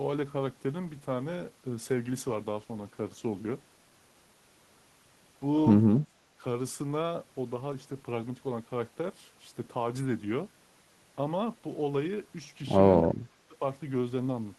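Two brief stretches of the speech point to an echo canceller that likely could not tell the near talker from loudspeaker echo while both sides spoke, so it turned everything down: speech suppressed in double talk. At 6.04 to 6.42 s the voice sinks by around 20 dB, and at 13.28 to 13.61 s it drops further, around 30 dB, each dip lasting roughly a third of a second.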